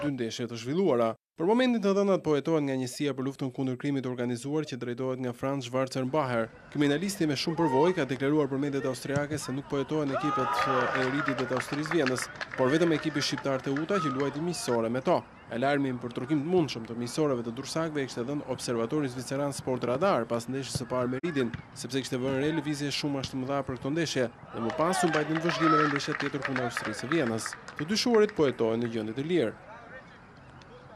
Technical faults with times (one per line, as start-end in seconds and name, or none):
21.18-21.25 digital broadcast dropout